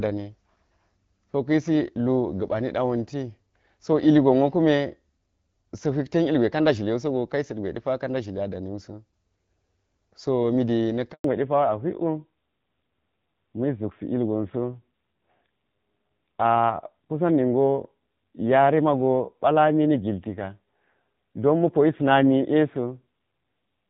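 At 11.12 s, just after "so mi de", the speech cuts off abruptly and there is silence for 120 ms until 11.24 s. This is a handover gap. The call switched between networks and no speech frames arrived during the transfer, so whatever was said in that window is lost.

From 11.24 s to the end, the speech sounds muffled and gritty, with nothing above 4 kHz. This is a fallback to narrowband. After the handover, the call dropped from the HD Voice wideband codec at 12.65 kbit/s, where coding damage was light, to an older narrowband codec. The rougher texture fits a rate around 7.4 kbit/s.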